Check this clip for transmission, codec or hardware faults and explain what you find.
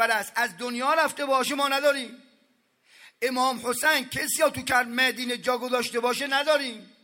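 No transmission, codec or hardware faults.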